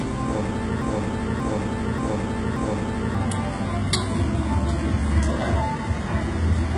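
A recording of everyday sound with two faults. From 0.82 to 3.15 s a broken-record loop repeats one 0.58 s fragment four times back to back, likely a stalled stream resending its last piece. Unlike a stutter or echo, each pass is identical and the audio behind it is lost. Throughout, the top end is gritty and metallic with nothing above 11 kHz, likely heavy HE-AAC compression at a very low bitrate, around 12 kbps. The top end is rebuilt treble, unlike a plain low-pass, which would sound dull.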